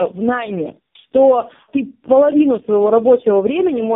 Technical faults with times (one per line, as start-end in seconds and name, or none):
0.00-3.95 tandem speech coding